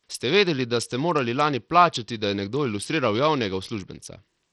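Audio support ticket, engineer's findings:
Bluetooth SBC compression, throughout: treble flickers and drops out, gritty aliased grain over the speech. Likely a low-bitrate SBC link starving the top sub-bands of bits.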